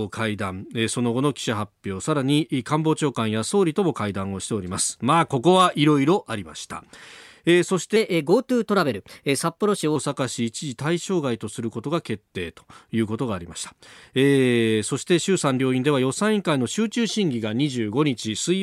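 From 7.96 to 9.96 s the speech suddenly turns quicker and higher, with pitch lifted by roughly two semitones and the pace hurried, before snapping back to normal. This is a section at the wrong speed: that stretch plays 1.12 times faster than it was recorded, so timing and pitch rise together. The likely cause is a player or edit clocking this segment at the wrong rate.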